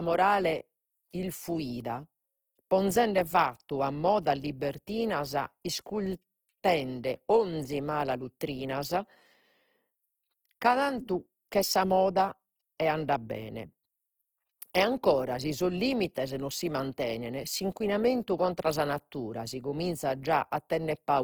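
Opus compression runs through the whole speech clip. The damage is plainly audible. The encoder appears to be in its music mode, which keeps each band's energy. When bits run short, it fills bands with folded or noise-like content. The voice turns rough and grainy rather than swirly. The bandwidth stays full, reaching about 20.2 kHz. The coarseness likely comes from a low bitrate, which fits roughly 16 kbps.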